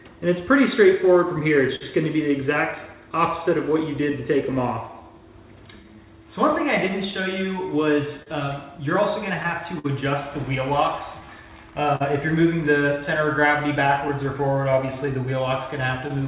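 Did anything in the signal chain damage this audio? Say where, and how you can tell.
Yes. The network and jitter-buffer stage shows clock drift between sender and receiver: the sender's clock runs roughly 4% slow, so the receiver's buffer keeps draining. The sound carries small, unevenly spaced timing hiccups from start to finish rather than one isolated event.

Repeated timing corrections run from 0.31 to 16.17 s. To keep pace with the slow sender, the receiver keeps repeating short pieces, stretching playback to about 98% speed and adding around 300 ms overall. Each correction is small and unevenly spaced.

Scattered short gaps appear in four stretches: 0.39 to 1.83 s, 3.46 to 4.91 s, 6.51 to 9.86 s and 13.23 to 16.11 s. Late or lost packets left small holes that concealment filled by continuing the previous sound. These show up as brief ticks or smears, the longest around 50 ms.

A short stall from a late packet occurs at 11.96 to 12.02 s. 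The jitter buffer ran dry, so the receiver held the last sound for 44 ms until the packet arrived. Nothing is lost, but that moment drags slightly with a faint buzz or dip. All of this rides on a G.711 A-law call path, consistent with 64 kbps, with nothing above 4 kHz.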